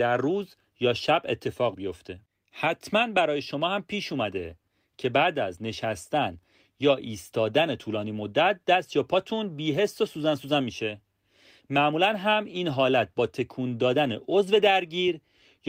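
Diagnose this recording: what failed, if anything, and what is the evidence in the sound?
The failure sits at the network and jitter-buffer stage: clock drift between sender and receiver. The sender's clock runs roughly 4 percent fast, so audio arrives quicker than the receiver plays it out and the jitter buffer keeps creeping toward full. You hear it as speech that never settles into an even pace for the whole clip, with small timing stumbles recurring at irregular spacing rather than any single obvious dropout.

Those stumbles are the receiver's repeated timing corrections, running from 0.05 s to 15.61 s. To hold the buffer level it keeps trimming tiny slices out of the stream, always in the same direction, which works out to playback at 104 percent speed. Each cut is small, so you get slight hiccups and a faintly hurried, unsteady rhythm rather than clicks or gaps, and they're spaced unevenly.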